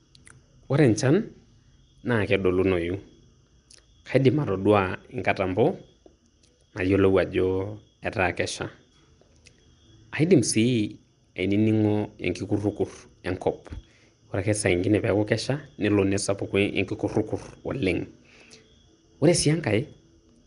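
Throughout, the speech has likely been through Nellymoser compression, the old Flash microphone codec, at a rate that fits a 44 kbps stream. Weak bands lose their bits and are refilled with noise, giving a rough, hissy halo and a smeared underwater quality, and there is nothing above 10.6 kHz.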